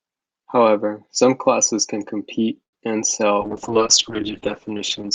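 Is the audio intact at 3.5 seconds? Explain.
No. A call bitrate drop runs from 3.42 to 5.14 s, after "can compete and sail". The encoder falls from 64 to 8 kbps and narrows from 20 kHz to 8 kHz, so the sound turns muffled and watery without gaps, unlike packet loss.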